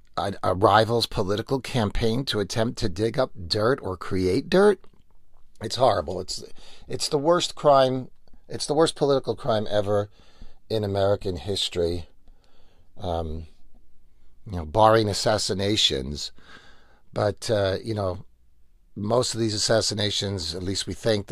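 Listening to this recording of speech, nothing stood out as a technical problem at any point.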